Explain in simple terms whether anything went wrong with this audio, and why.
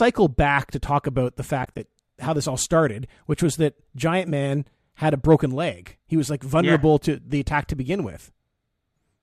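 Something went wrong between 1.63 and 1.79 s, just after "to talk about the" and before "how this all started". The speech briefly drops out in a few short, soft-edged gaps. This is AAC frame loss with muting, likely in the low-delay AAC used for calls. Small chunks of data went missing, and the decoder filled them with silence. Unlike a hard cut, the sound fades out and back in.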